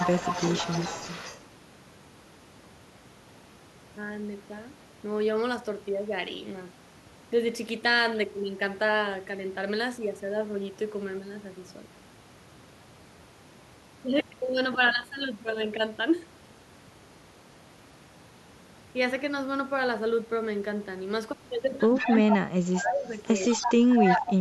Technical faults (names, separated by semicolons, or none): echo leak; speech suppressed in double talk